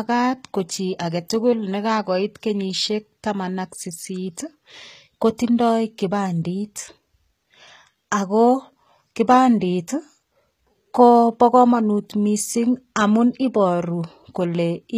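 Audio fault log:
Throughout, HE-AAC compression: the treble of this speech sounds bright but synthetic, with s sounds coming out gritty and lispy. The damage is plainly audible, which fits a bitrate around 20 kbps, and is likely due to spectral band replication rebuilding the upper band from copied lower bands. On a spectrogram the upper region shows smeared, repeated blocks that don't line up with the harmonics below the crossover, and there is nothing at all above 14.9 kHz.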